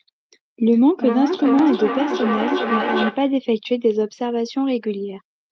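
Feedback echo between two devices runs from 0.72 to 3.38 s in this speech recording: the sound returns roughly every 0.4 seconds, each pass thinner and more ringing, with the loudest repeat only about 5 dB below the direct speech. A second device in the same room is playing back what this microphone sent, and the microphone captures it again. Its echo canceller ignores sound from the other device's speaker, so the loop keeps cycling.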